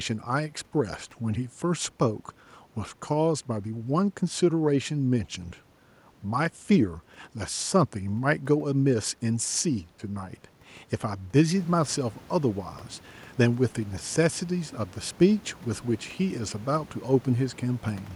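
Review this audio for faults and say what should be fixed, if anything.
Nothing stood out on listening that would need fixing; the room's background noise rises by about 11 dB at roughly 11.5 s but stays about 25 dB below the speech.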